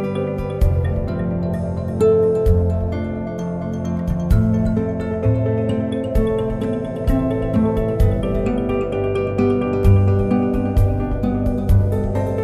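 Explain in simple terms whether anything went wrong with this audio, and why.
Nothing went wrong here; the audio has no audible faults.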